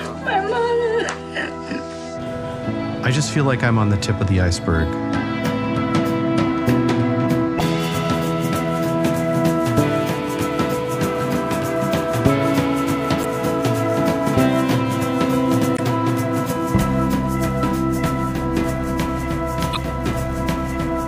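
At 7.57–7.61 s, 13.21–13.25 s, 15.74–15.80 s and 19.72–19.77 s, damaged data in the compressed stream produces brief glitches of roughly 45–55 ms each. Corrupted bytes make the decoder misread those frames, lose sync and hunt for the next valid header.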